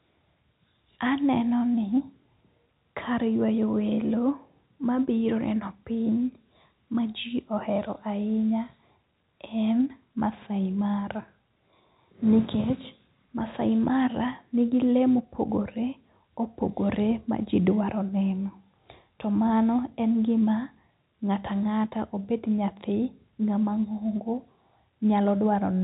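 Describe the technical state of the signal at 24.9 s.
At 24.9 s the speech is intact, with no fault audible beyond the narrow telephone band of the G.711 coding, which carries nothing above about 3.8 kHz.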